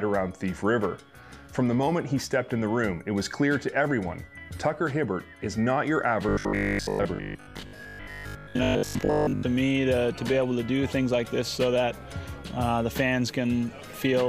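From 6.29 to 9.45 s there's robotic sound from repeated short buffers: a rigid 50 Hz buzz, likely from a roughly 20 ms chunk looping through most of that stretch.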